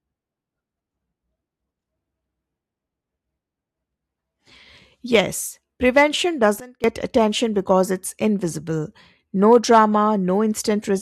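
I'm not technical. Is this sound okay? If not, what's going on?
No. There's a sudden gain jump from 6.6 to 6.84 seconds: for about a quarter of a second the speech abruptly becomes much quieter, then returns. The volume switches instantly rather than fading, and the background hiss drops right along with the voice. That points to a digital level setting being changed in a single step with no smooth transition, most likely a volume adjustment applied suddenly inside the recording or processing software.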